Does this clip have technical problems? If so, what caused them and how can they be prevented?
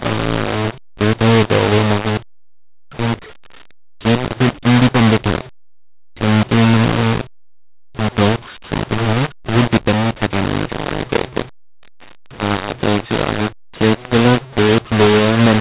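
Yes. Throughout the speech the sound is harsh and gritty, with levels that jump unevenly, and the pauses are filled with a hiss instead of going quiet. This is a mu-law and A-law mix-up: the telephone audio was encoded with A-law G.711 but decoded as mu-law, so each 8-bit code maps to the wrong level and even near-silent samples come out audibly loud. To prevent it, make sure encoder and decoder agree on the same G.711 law.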